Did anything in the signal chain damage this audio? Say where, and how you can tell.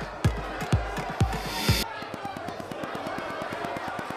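Yes. From 2.02 s to 4.11 s there's a train of clicks: evenly spaced ticks at about 8.7 per second, roughly twenty of them, all much the same shape and standing about 15 dB above the programme, so they poke through even the quieter stretches. A steady, identical pulse like that doesn't come from the source itself. The likely stage is the analogue wiring, with something nearby coupling a repeating spike into the line, or else a struggling interface.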